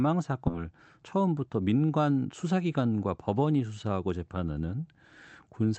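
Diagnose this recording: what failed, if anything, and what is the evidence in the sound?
The failure is in the network and jitter-buffer stage. At 0.47 s the audio makes a skip ahead. Roughly a second of speech is missing, and nothing fills the join, which lasts only about 20 ms. The two sides meet almost directly. Later packets were already waiting, so the stretch was dropped, either in transit or by the overflowing buffer, and playback went on. Delay fell by about a second at that moment.

Right after, from 0.57 s to 1.90 s, a jitter buffer speed-up follows. The speech runs at about 113% of normal speed with unchanged pitch, so it sounds hurried. The buffer was holding more audio than its target. It trimmed short pitch-period pieces, many in a row, removing roughly a fifth of a second in total. This runs over the Opus call path, coded at 32 kbps with the audio band-limited to 8 kHz.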